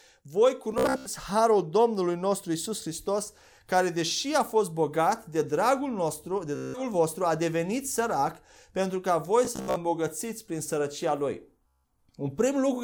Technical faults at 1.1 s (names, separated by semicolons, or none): Bluetooth stutter